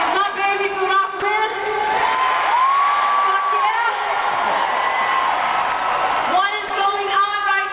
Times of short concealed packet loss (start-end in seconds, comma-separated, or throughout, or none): none